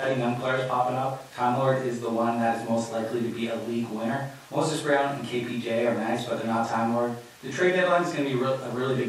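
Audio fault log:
No fault can be heard in this speech recording. Nothing here calls for an entry in the log.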